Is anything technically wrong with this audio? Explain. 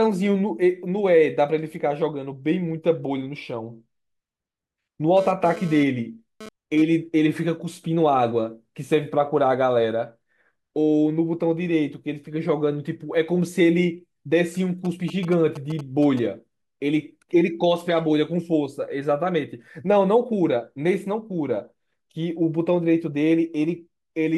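Yes. Two stretches of radio interference from a nearby 2G phone have been picked up by the recording's audio circuitry.

From 5.17 to 6.82 s there is GSM phone buzz. The phone's transmitter was pulsing at about 217 bursts per second, and a stage in the audio chain rectified those radio pulses into an audible signal. The result is a hard, raspy buzz at 217 Hz, dense with harmonics and unrelated to the speech, sitting about 16 dB below it. Its short, bounded span fits a phone in the middle of a data transfer.

From 14.85 to 16.19 s there are GSM signalling bursts. Here the phone sent only brief groups of pulses, the kind it uses to talk to the network, and the same rectification turned each group into sound. Instead of a continuous tone, this comes through as a galloping dit-dit-dit of short 217 Hz buzzes, roughly 15 dB below the speech.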